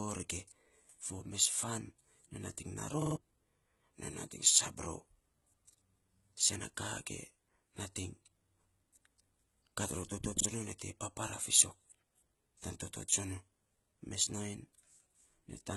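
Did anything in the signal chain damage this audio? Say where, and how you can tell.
Yes. HE-AAC compression, throughout the clip: the upper spectrum sounds rebuilt rather than captured, with gritty, lispy sibilants and treble that doesn't line up harmonically with the band below. This is likely a codec stage running HE-AAC at a very low bitrate, consistent with around 16 kbps, where band replication replaces the real high end.

Repeated buffer, at the driver or buffer stage, from 3.02 to 3.16 s and from 10.40 to 10.45 s, the second between "kat ror toto" and "nyo te papara fiisok". A 46 ms fragment plays three extra times, then once, with hard joins. That fits a 2048-sample buffer replayed when fresh audio arrived late, costing about 150 ms and about 50 ms of sound.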